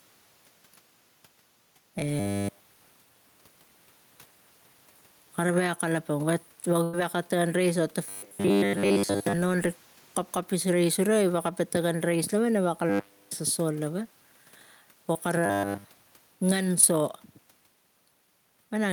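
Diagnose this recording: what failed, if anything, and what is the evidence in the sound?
Gain pumping runs through the whole speech recording. The gain swings by about 10 dB. Loud and soft parts sit unnaturally close. This is likely input gain set far too high, with a fast limiter or compressor clamping it at the call-processing stage.

Robotic sound from repeated short buffers appears at 2.20 to 3.03 s, 8.04 to 9.33 s, 12.89 to 13.31 s and 15.46 to 15.85 s. The speech becomes a rigid metallic buzz at 100 Hz. That fits a 10 ms buffer being replayed in the driver or buffer stage, likely because fresh audio arrived too slowly.

Short concealed packet loss occurs at 2.39 to 2.45 s, 15.13 to 15.17 s and 16.81 to 16.85 s. Each is a brief smear or wobble, with 20 to 40 ms of audio missing. The network dropped a packet, and the receiver's concealment extended the previous sound before blending back in.

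A burst of packet loss hits at 6.83 to 6.95 s. About 100 ms is missing. The last sound is held and fades, then the speech resumes further on. Consecutive packets were lost or late in the network, and concealment could only stretch the previous audio across the gap. The room noise, about 38 dB below the speech, belongs to the recording itself.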